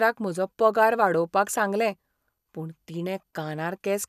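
No technical faults are audible.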